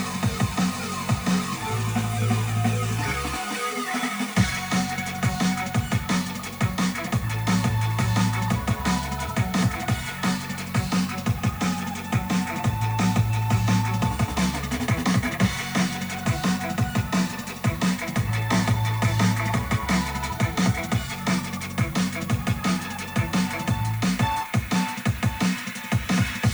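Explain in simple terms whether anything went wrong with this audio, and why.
The audio was stored with very few steps to describe each moment, which fits an 8-bit signal, a fault called low bit depth with noise shaping. The rounding errors were pushed toward high pitches, so a steady, thin, fairly loud hiss rising into the treble runs throughout.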